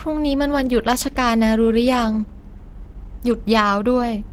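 Opus compression runs throughout: the speech sounds muffled, hoarse and grainy, likely from Opus in its hybrid speech mode, which fits a low bitrate near 16 kbps.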